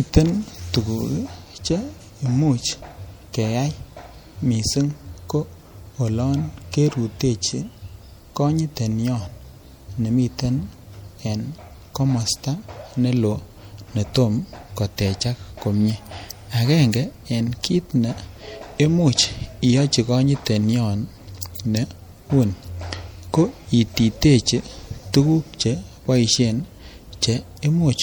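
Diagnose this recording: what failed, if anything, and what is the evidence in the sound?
The fault sits at the codec stage and runs through the whole speech recording. It has plainly audible MP3 compression damage, most likely from a low-rate MP3 encode that fits about 64 kbps: a watery, swirling texture with smeared consonant attacks. On a spectrogram the weaker bands break into patchy blocks that switch on and off from frame to frame, leaving holes in the fine detail.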